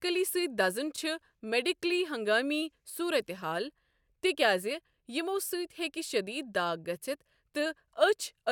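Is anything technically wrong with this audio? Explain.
No, nothing in this speech recording points to a technical fault. No dropouts, glitches or distortion turn up anywhere in it.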